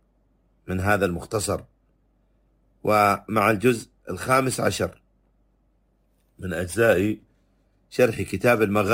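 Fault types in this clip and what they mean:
Crude rate conversion: The sample rate was raised by repeating the nearest samples, without filtering. The repeat pattern fits a step from 32 kHz to 44.1 kHz. Throughout, it adds a gritty, inharmonic fizz, some 25 dB below the sound, following loud and high parts.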